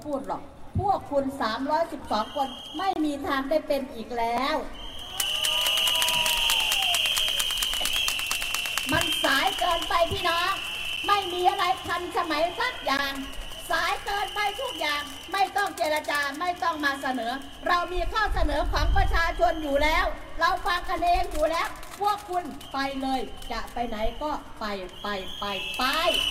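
At 2.93 s there's a gap between stream segments. The audio drops out for about 26 ms with hard edges on both sides, then carries on. The timestamps of two segments didn't quite meet, so the player filled the hole with silence. Nothing is actually lost; the timeline just gets stretched a little.

At 4.37 s you hear a repeated buffer. A tiny slice, about 12 ms, which fits a 512-sample buffer, plays twice in a row because fresh audio didn't arrive in time and the device replayed what it had. Since the buffer is so short, it comes across as a click or brief buzz rather than an obvious stutter, and roughly 10 ms of real audio goes missing.

The segment gaps come back at 8.96 s, 10.96 s, 12.97 s and 20.99 s. They're shorter, roughly 5 to 15 ms, and land on 2-second segment boundaries, so they read as small regular ticks or dropouts.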